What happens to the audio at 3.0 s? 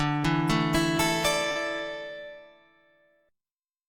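Nothing goes wrong at 3.0 s; the audio runs through that moment intact, with no dropout, click or distortion.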